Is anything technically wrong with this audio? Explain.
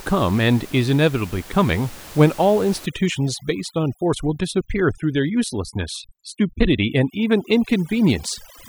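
Yes. From 2.86 s to the end at 8.69 s there is overdone noise removal. The noise reduction is set too strong, shutting off individual frequency bands near its noise estimate along with quiet parts of the speech. The room noise, about 21 dB below the speech, drops and breaks up into twinkling specks.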